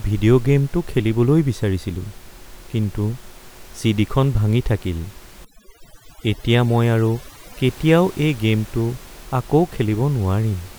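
From 5.45 to 7.64 s, just after "খন ভাঙি থাকিল", the background drops into twinkling near-silence, as overdone noise removal gated quiet bands away along with the room noise.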